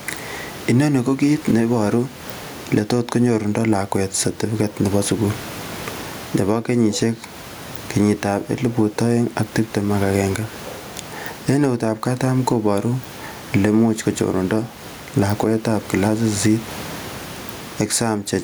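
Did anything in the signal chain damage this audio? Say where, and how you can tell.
Yes. Throughout the speech, the level swings by around 15 dB. Loud and quiet syllables sit unnaturally close in level, and the whole delivery sounds squashed. This is gain pumping, most likely from input gain set far too high for the microphone with a fast limiter or compressor in the call-processing stage, which clamps down on each loud sound and releases in the gaps.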